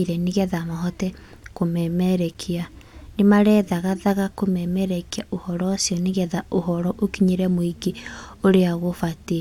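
No technical faults can be heard anywhere in this speech recording.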